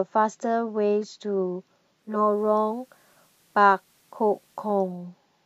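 Speech, with digital radio blending to analogue from 1.95 s to 5.10 s: the receiver loses its digital stream and cross-fades over about 0.44 s to the station's FM broadcast, then returns. Level stays matched, so what gives it away is the FM hiss rising to roughly 40 dB below the speech for the whole stretch. A dropout or concealment fault would gap or smear the sound instead.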